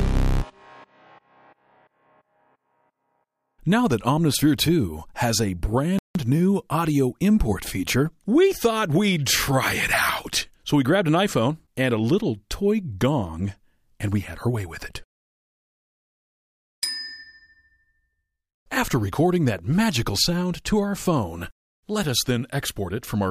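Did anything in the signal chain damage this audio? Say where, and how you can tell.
Yes. At 5.99 s the sound cuts off in mid-flow and the output stays silent for about 166 ms, resuming at 6.15 s. This is a playback stall, most likely the player's buffer running dry or its thread being blocked. On a waveform the envelope drops abruptly to a flat, near-silent line with no fade. A spectrogram shows a clean vertical gap across all frequencies, with energy returning just as sharply when output recovers.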